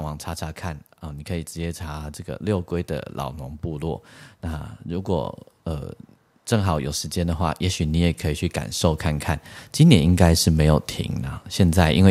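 From 6.48 s to 10.9 s the level climbs steadily. This is automatic gain rising. The gain control judged the incoming speech too quiet and kept turning it up. It did this slowly rather than in one step, adding about 7 dB over more than four seconds. The voice grows louder. The background noise rises with it at the same rate. Only the gain moves.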